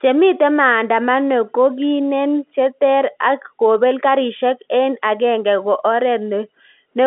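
Nothing is technically wrong with this speech clip: it carries the normal sound of G.711 telephone coding, with the line band running from about 250 Hz to 3.5 kHz, nothing above 3.8 kHz, and at most a faint codec trace, which fits standard 64 kbps mu-law telephony.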